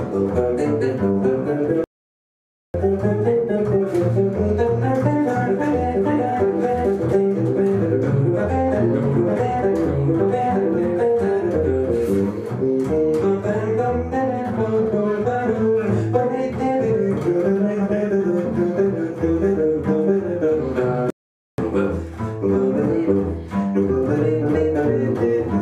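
At 1.84 s the sound cuts to silence for about 0.9 s, and again at 21.10 s for about 0.48 s, before carrying on. These are playback stalls, likely from the player running out of data or its thread being blocked, leaving the output silent until it recovered.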